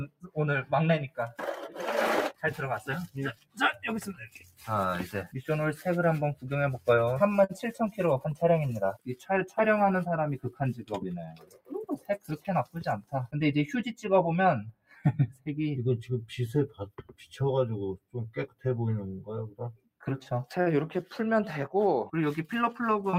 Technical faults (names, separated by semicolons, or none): noise suppressor applied to music or sounds; sound cut by the noise suppressor